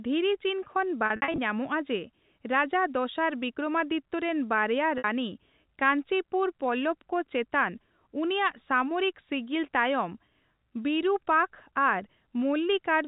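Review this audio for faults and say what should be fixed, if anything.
Packets were lost on the network, and the receiver filled each gap by repeating the last pitch period. This packet loss with pitch repetition occurs twice. From 1.06 to 1.38 s, about 180 ms goes missing in bursts spread over 320 ms, with the longest run at 60 ms. At 4.98 s a single 60 ms gap appears. The gap lengths fit 20 ms packets. The shorter losses are heard as a slightly held, buzzy tone, while the 60 ms runs fade out toward silence, all within the band-limited G.711 telephone sound. Forward error correction or redundant packet transmission, together with a more generous jitter buffer, would keep these losses from reaching the listener.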